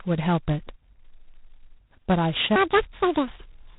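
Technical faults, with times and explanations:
Throughout, G.726 ADPCM: heavy coding damage leaves a harsh hiss riding the speech level, and nothing above 3.8 kHz. This fits a 16 kbit/s rate.
2.56 to 3.78 s, section at the wrong speed: the speech runs 1.8 times fast, pitch rising roughly ten semitones. Likely a wrong playback clock.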